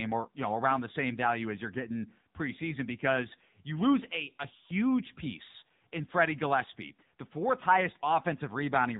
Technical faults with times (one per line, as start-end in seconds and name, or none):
0.00-8.99 AMR narrowband mobile codec